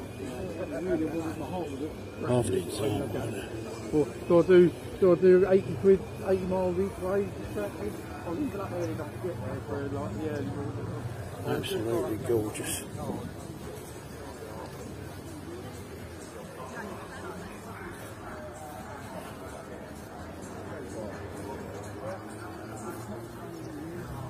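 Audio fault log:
No faults heard anywhere in this clip.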